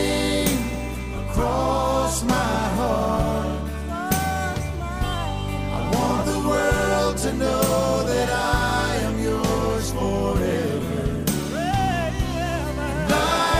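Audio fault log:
6.21–6.24 s, compressed frames skipped: about a tenth of a second of audio vanishes as several 20 ms frames go unplayed, so the audio jumps ahead rather than leaving a silent gap.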